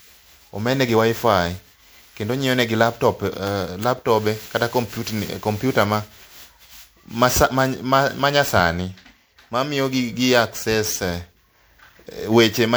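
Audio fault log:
Throughout, generation loss. The speech sounds swirly, smeared and hollow, with blurred consonant onsets, more degraded than a single MP3 pass at 128 kbit/s would leave it. This is likely from the audio being decoded and re-encoded as MP3 around ten times. Each pass quantises again on a shifted frame grid. Coding noise and missing spectral bands stack up, so the sound thins and swirls. Transients lose their edge with every generation.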